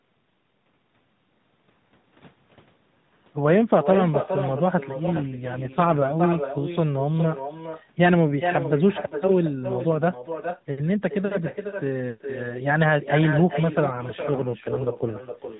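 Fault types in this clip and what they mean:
Echo with no canceller: the far end's loudspeaker feeds the microphone and nothing removes it, so every phrase returns roughly 400 ms later at about 8 dB below the speech, and thinner. A spectrogram shows each syllable's pattern faintly repeated, and the waveform shows a smaller trailing copy after each burst.
AMR rate drop: the narrowband codec falls from 12.2 to 5.9 kbps, trading detail for error protection, between 5.04 and 6.14 s and again from 13.92 s to the end. The speech turns buzzier and more synthetic with no gap or band change. Formants look smeared and harmonics blotchy under the same 4 kHz ceiling.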